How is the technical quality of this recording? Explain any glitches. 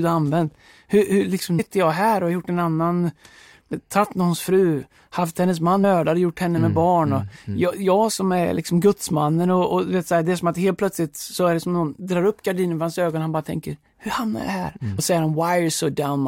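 The recording is compromised by four brief glitches caused by damaged data in a compressed stream. They occur at 1.58 to 1.60 s (just before "jag här och har"), 3.72 s (before "tagit någons fru haft"), 5.83 s, and 14.98 s (right after "tänker hur hamnar jag"). At each point corrupted bytes make the decoder misread frames and lose sync, so it hunts for the next valid header. The result is a short chirp or blip. On a spectrogram each shows as a thin vertical smear of broadband energy, and on the waveform as an abrupt discontinuity.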